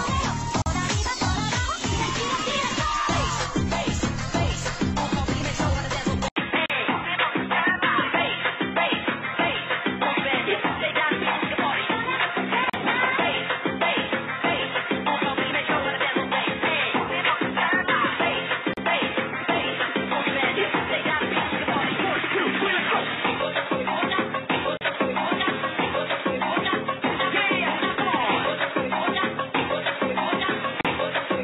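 At 0.62 s there's a 42 ms dropout, the first gap at a join of encoded pieces, where separately encoded chunks were butted together untrimmed, leaving encoder delay and padding in. At 6.28 s the sound goes dull after an 80 ms silence, nothing above 3.8 kHz, new noise roughly 50 dB down, level about the same, so likely an input switched to a poorer device. Similar 37 ms join gaps follow at 6.66, 12.70, 18.74, 24.77 and 30.81 s, every 6 s.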